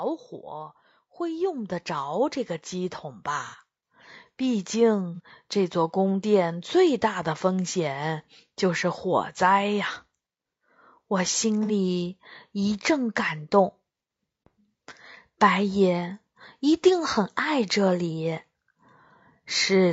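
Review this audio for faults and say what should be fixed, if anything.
The speech sounds rough and grainy throughout, with noise between harmonics and a thin top band, likely from low-delay AAC compression (AAC-ELD) at a bitrate around 32 kbps. Raising the bitrate would prevent this.

Voice and background swell together by about 11 dB from 0.5 to 8.28 s as the automatic gain rises. Fixing the input level, or slowing and capping the AGC, would prevent it.

Short smeared, noisy patches at 3.47–3.56 s (60 ms), 5.15–5.20 s (30 ms) and 11.63–11.72 s (60 ms) are AAC frame loss with concealment, where the decoder filled gaps from the preceding spectrum. Forward error correction or a more robust network path would prevent it.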